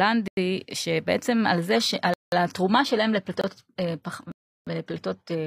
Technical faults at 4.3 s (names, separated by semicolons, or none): adaptive stream at a lower bitrate; block of digital silence